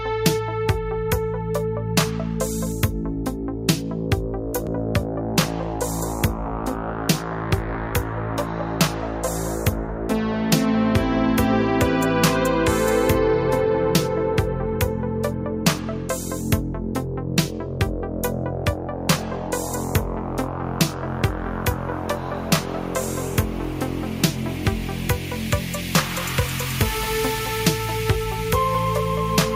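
No technical faults are audible.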